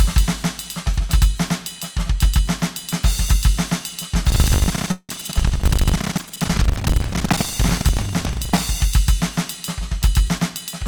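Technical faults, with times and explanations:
Throughout: doubled audio track. The whole piece of music is heard twice, with a second full-band copy trailing about one and a half seconds behind at roughly the same level. The copy is clean, with no decay or added room sound, which separates it from reverb or a slapback echo. It likely comes from the signal being captured a second time by a slower path, or from an edit that left two copies out of step.
4.28 to 8.60 s: buffer tearing. A robotic rattle at 25 Hz runs through this stretch and sounds only while the music is playing. The writer and reader of a ring buffer have slipped so that they cross inside every period. Around a third of each buffer carries audio from one lap earlier, about 70 ms old, with hard joins on both sides. The fixed buzz rate and its dependence on signal mark it apart from a dropout or a noise burst.
4.91 to 5.11 s: call audio freeze. 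Within the tearing, the sound stalls for 175 ms. The last fragment is stretched into a fading buzz that ends in about 40 ms of silence, and then the music resumes exactly where it stopped. Nothing is lost, but everything after this point is 175 ms late. That sets it apart from a packet-loss gap, where audio would be skipped. This is likely held-up packets emptying the jitter buffer.
9.99 to 10.83 s: jitter buffer speed-up. The closing stretch runs at 105 percent speed with no change in pitch, and the tempo hurries noticeably. The receiver was holding more audio than its target and trimmed about 50 ms in total, in many small cuts of one or a few pitch periods each, to bring the delay back down. Unlike resampling, the pitch stays put, and unlike a freeze, no gap is added.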